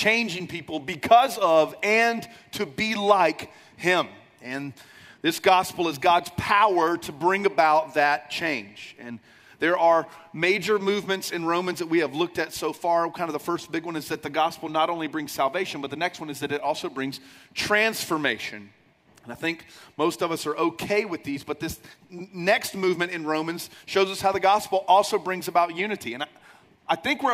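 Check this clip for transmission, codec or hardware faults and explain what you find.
Nothing in the recording stood out as a problem on listening.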